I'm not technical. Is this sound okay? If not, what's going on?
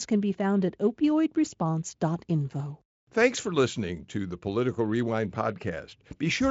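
Yes, this speech sounds fine, with nothing going wrong at any point. It has passed through the Speex speech codec, which leaves little or no audible trace here, though the sound stops at about 7.7 kHz, so the very highest, airiest part of the sound is missing.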